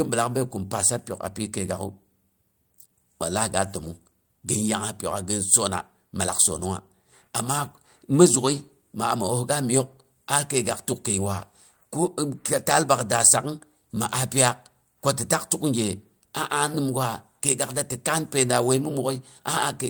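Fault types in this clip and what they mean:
No fault types are present in this clip.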